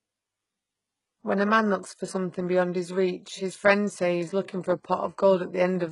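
Throughout the speech, s sounds turn gritty and lispy, likely from HE-AAC compression near 12 kbps faking the treble. A spectrogram shows smeared, copied upper bands ending abruptly at 11.1 kHz.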